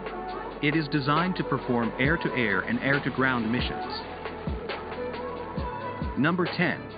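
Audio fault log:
No technical faults can be heard anywhere in this audio; the signal holds steady and continuous at every point.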